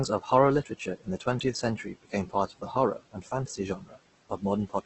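Throughout the speech the sound is rough and grainy, its tonal parts turned noisy, with nothing above 8.2 kHz. The cause is likely heavy Opus compression at roughly 12 kbps. A spectrogram shows a hard ceiling at 8.2 kHz and noise-filled bands instead of clean harmonics.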